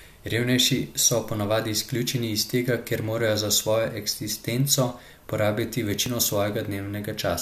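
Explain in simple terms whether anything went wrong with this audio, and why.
An overlap between stream segments shows up at 6.06 s, just after "eksistenco porabiti", as a brief click or tiny skip. The audio arrives in chunks, and here two chunks claimed the same stretch of time. The player treated that stretch as doubled and trimmed it, but the speech wasn't actually repeated, so a sliver of real sound vanished and the waveform jumped. Its position fits chunks about 6 seconds long.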